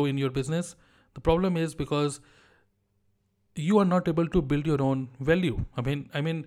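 Speech recording with no audible technical faults.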